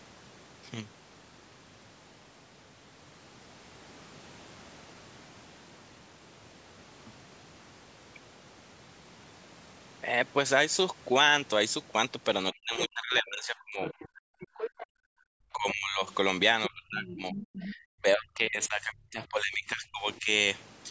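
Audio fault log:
12.53–13.85 s, 15.53–16.03 s, 16.69–20.3 s: speech suppressed in double talk. The speech sinks by roughly 25 to 40 dB. The losses total about a second in the first stretch, half a second in the second and around three seconds in the last. The likely cause is an echo canceller that could not separate the talker from loudspeaker echo while both sides spoke, so it turned both down. On a spectrogram the harmonics thin out, and the waveform envelope caves in.
13.85–14.08 s, 14.41–14.86 s, 16.64–16.68 s, 17.01–17.72 s: other side's voice leaking through. A second, fainter voice surfaces in short scraps, roughly 10 to 15 dB under the main speech. This is likely loudspeaker playback that the echo canceller failed to remove from the microphone. A spectrogram shows weak, separate harmonic traces alongside or just after the main speech, and the waveform shows small bumps.
14.13–15.25 s: background gated by the echo canceller. 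While the loudspeaker plays, the room sound drops by about 40 dB for roughly 0.7 s in total, then returns. The canceller clamps the microphone hard until it releases. On a spectrogram the noise floor goes nearly black in that span, and the waveform flattens almost to silence.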